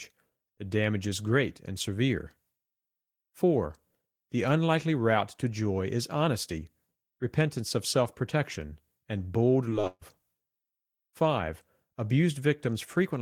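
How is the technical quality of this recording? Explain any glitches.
The recording has two packet-loss faults back to back, just after the words "self protection and bold", at about 9.8 to 10.0 s.

From 9.81 to 9.85 s there is a short concealed packet loss. About 20 ms of audio did not reach the decoder in time, and the receiver covered the hole by extending the preceding sound for roughly 19 ms before rejoining the real signal. It is heard as a brief smear or wobble in the speech, short enough that a small piece of a sound can drop out.

Right after it, from 9.87 to 10.03 s, comes a burst of packet loss. Here about 140 ms went missing in one run. The receiver continued the last sound for about 139 ms and faded it down as the gap lengthened, ending in roughly 20 ms of silence. This gives a held buzz or fading hiss in place of real speech. When the audio resumes, the material that belonged in that gap is simply gone, so the speech jumps forward.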